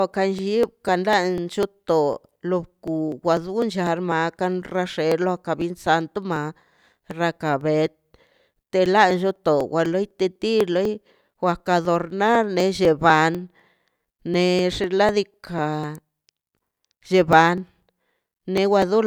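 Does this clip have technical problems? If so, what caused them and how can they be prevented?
Yes. Periodic USB or driver dropouts run from 0.14 s to 18.82 s. Every 0.25 s, a background task stalls the audio path and about a millisecond of speech is skipped. The ticks are evenly spaced and heard only while sound is present, unlike random crackle. Disabling that task or enlarging the buffer prevents them.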